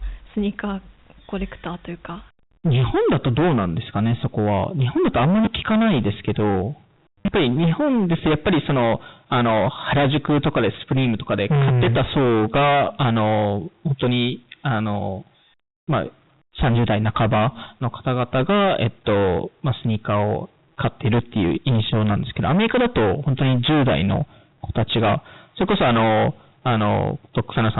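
Right from the start the speech is hit by hard clipping, and it never lets up. The level is driven about 26 dB past what the chain can pass, so around a fifth of the waveform gets sliced flat. Those squared-off tops throw harmonics up toward the 4 kHz ceiling of the G.711 telephone band, so every syllable carries a harsh, gritty fuzz rather than just the odd crackle on peaks.

At 5.45 s there's a quick stutter, packet loss with the last packet repeated, covering about 20 ms. The receiver replays the last audio it got, and the loop doesn't meet the waveform cleanly, so you hear a small hiccup. The bigger one comes at 7.23 to 7.28 s. About 80 ms goes missing across a 100 ms stretch, with the longest gap around 40 ms. The repeated chunks join out of step, giving a brief robotic buzz.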